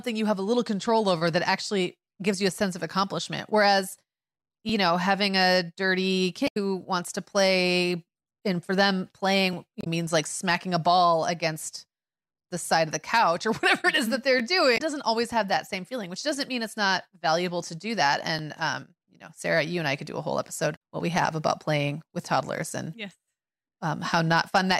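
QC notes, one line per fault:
4.69, 9.53, 14.40, 18.39 s: overlapping chunks. Each 5 s chunk begins 12 ms before the previous one ends, so that sliver of speech replays, giving a brief click-stutter.
6.44–6.57, 9.79–9.87, 14.74–14.80, 20.72–20.77 s: damaged data in a compressed stream. Corrupt frames break decoder sync while it hunts for the next header, producing short chirps or blips.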